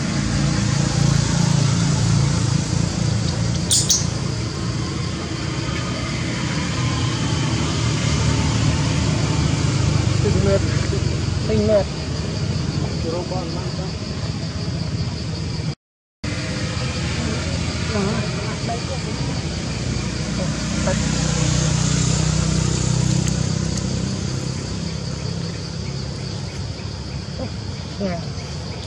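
At 3.71 s the audio runs into hard clipping that lasts until 3.96 s. For about a quarter of a second the signal is driven roughly 8 dB past what the stage can pass, so every peak is sliced flat. Those squared-off tops spray harmonics high into the spectrum, heard as a gritty, buzzing crackle. Unlike soft saturation, which rounds peaks and thickens the tone gently, this distortion is abrupt and brittle, switching on and off with the overload.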